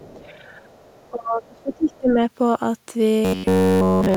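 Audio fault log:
0.00–0.26 s, 0.88–1.09 s, 1.92–1.98 s: other side's voice leaking through. A faint second voice, about 30 to 35 dB under the speech, likely residual loudspeaker echo the canceller missed. It shows as weak, separate harmonic traces on the spectrogram.
0.14–0.38 s, 1.10–2.22 s: speech suppressed in double talk. The voice dips about 15 dB, then up to about 25 dB across roughly a second, likely because the canceller attenuated everything during overlap. The waveform shows sunken envelopes.
0.66–0.82 s: background gated by the echo canceller. The room tone drops about 6 dB for roughly 150 ms while the loudspeaker plays, then recovers. The noise floor shows a brief darkened notch.
3.25–4.16 s: robotic sound from repeated short buffers. A rigid metallic buzz at 93.8 Hz, which fits repeats of a roughly 10.7 ms buffer and likely comes from starved playback. The spectrogram shows evenly spaced horizontal harmonic lines.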